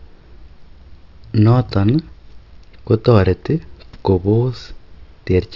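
No faults are audible in this speech recording.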